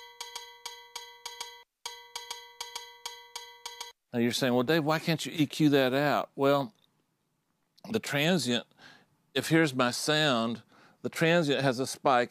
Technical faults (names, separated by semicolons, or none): crude rate conversion